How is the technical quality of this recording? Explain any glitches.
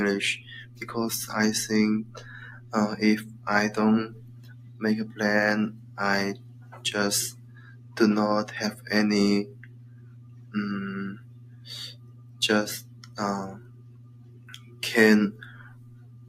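The quality is compromised by a speech-tuned noise suppressor left running. A noise suppressor applied to music or sounds treats steady content as noise, so gain keeps swinging by around 20 dB, letting onsets through while sustained parts sink, giving a pumping, thinned texture across the clip.

The sound cut by the noise suppressor is clearest at 0.65–0.82, 2.05–2.72, 4.14–4.81, 5.76–6.79, 7.33–7.96, 9.51–10.54, 11.17–14.82 and 15.56 s to the end. Each time the suppressor judges the held or fading sound to be noise and pulls it down by up to about 5 dB, so tails shorten and level dips audibly, most prolonged in the long stretch from 11.17 s.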